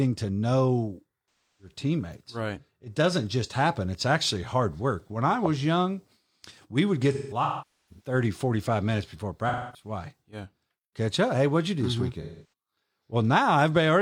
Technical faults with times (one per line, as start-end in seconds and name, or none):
7.13-8.14 AAC frame loss with concealment
9.48-9.89 AAC frame loss with concealment
12.21-12.45 AAC frame loss with concealment